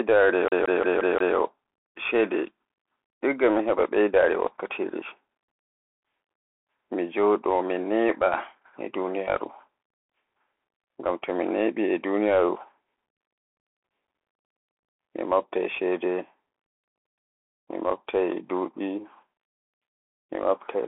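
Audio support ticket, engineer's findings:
Bluetooth CVSD headset codec, whole clip. Speech band-limited to roughly 300 Hz to 3.4 kHz, nothing above 3.8 kHz. Granular hiss under speech, scratchy s sounds, loud high passages distorting where the adaptive step size can't keep up. Sound fits a 64 kbps one-bit delta stream. Distinct from a plain narrowband line: the slope-overload grit and hiss, not just lost top end.

CD stuck on one turn, 0.48 to 1.36 s. Same 175 ms slice plays five times at an even rate, with a short mute at each jump back. Laser skipping one track per disc revolution. Distinct from network packet repeats: fixed period and clean mutes, not irregular concealment glitches.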